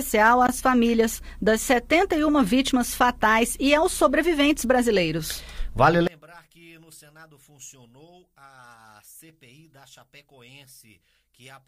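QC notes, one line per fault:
6.07–11.67 s, one channel inverted: from 6.07 s to the end the mono-summed level falls by about 29 dB, leaving only a faint residue of the sound with the centre largely gone. The likely cause is reversed polarity on one stereo channel. Material common to left and right cancels when the two are added, so only the small difference between channels survives the fold-down.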